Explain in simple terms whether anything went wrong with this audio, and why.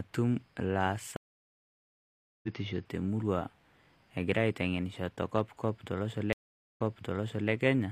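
Two stream reconnects break this speech. At 1.16 s it goes silent for 1.26 s, then returns near 2.48 s on "te murrrua", skipping ahead about 0.7 s. At 6.33 s it drops out for 0.43 s and resumes 0.74 s early, repeating a moment.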